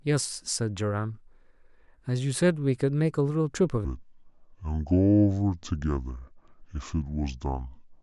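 Speech that plays at the right pace for the first few seconds, then from about 3.85 s to the end suddenly drops into a slow, heavy drawl. That's a wrong sample rate. The rest of the audio sounds like it was captured at 48 kHz but is being played back at 32 kHz with no conversion, so everything runs at about two thirds speed and sits roughly seven semitones lower, with pitch and tempo dragging down together.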